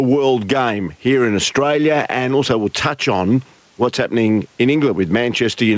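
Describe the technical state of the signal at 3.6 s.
Gain pumping sits at 3.6 s as it does everywhere. The gain swings around 10 dB, likely from a fast limiter taming excessive gain.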